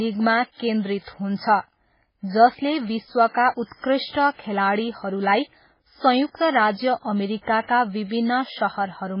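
Throughout the clip the speech sounds watery and swirly, with metallic chirps on s sounds, smeared consonant attacks, and nothing above 5.3 kHz. This is likely MP3 compression at very low bitrate, with damage consistent with roughly 16 kbps. Short of bits, the encoder cut the treble at a fixed frequency and zeroed weak frequency lines, which then flicker on and off between frames and produce the swirling texture.

From 6.29 to 6.35 s a short hiss rises just before a sharp onset, and the attack lands soft and smeared rather than crisp. This is pre-echo. The codec spreads its quantisation noise evenly across a whole transform block, so when a loud attack falls late in that block, noise sized for the loud part also fills the quiet 58 ms ahead of it.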